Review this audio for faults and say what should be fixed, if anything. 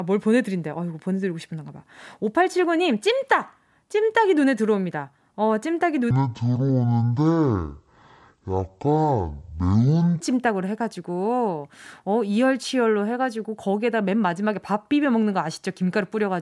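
From 6.11 to 10.20 s, a wrong sample rate plays the audio at half its recorded rate with no conversion, which fits 48 kHz material read as 24 kHz. The speech there runs at half speed and drops 12 semitones, a full octave, sounding low and dragged. To prevent it, confirm each stream's rate at every hand-off and resample wherever the source and playback rates differ.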